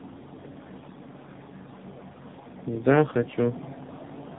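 Tandem speech coding affects this speech clip throughout. The call seems to have crossed several network borders, being decoded and re-encoded at each, and the compounded damage fits three speech codecs in a row, likely an AMR-NB leg, an ADPCM hop and a second AMR-NB leg. Each coder re-quantises the errors left by the one before, so the speech comes out rough, muffled and warbly, with nothing above 3.8 kHz.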